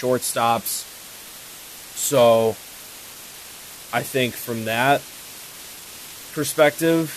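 From start to finish the speech sits over a constant, even hiss, the signature of low bit depth with dither. The audio was reduced to 6 bits, and dither noise was added before rounding, so the quantisation error became steady white noise rather than distortion. The hiss sits roughly 20 dB below the speech, while the speech itself stays clean and undistorted.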